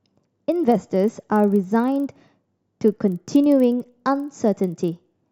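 A resampler restarted on every block, converting each 40 ms block of this speech in isolation and likely upsampling 24 kHz material to 48 kHz, leaves an error at every block edge, heard as a 25 Hz ticking buzz riding on the speech throughout.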